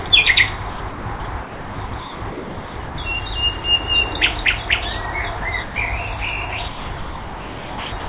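At 0.08 to 0.10 s and again at 3.62 to 3.64 s, 20 ms of sound drops out to steady noise or near silence. This is sound dropped by the voice detector, likely because the sender's detector briefly judged the signal to be background and comfort noise filled the gap.

From 0.70 to 2.98 s, 5.38 to 5.76 s, and 6.68 s to the end at 8.08 s, the sound is chopped by the voice detector. The transmission likely switched repeatedly between the real signal and synthetic comfort noise, which replaces about 1.56 s, 0.16 s and 1.25 s in those stretches. The result is choppy. Throughout, nothing above 4 kHz is present, which fits a G.711 call path.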